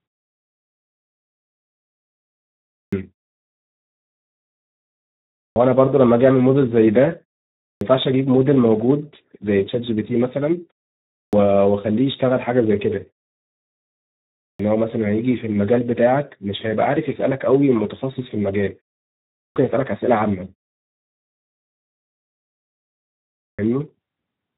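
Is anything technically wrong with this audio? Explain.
Yes. Throughout, the Speex codec at about 11 kbps starves the excitation of bits, leaving the speech noisy and hoarse, with nothing above 3.8 kHz. At 2.81, 5.44, 7.69, 11.21, 14.48, 19.44 and 23.46 s there is a clipped start after a pause: the output device sleeps in silence and wakes late, swallowing roughly 115 to 125 ms, so speech begins abruptly without its first sounds.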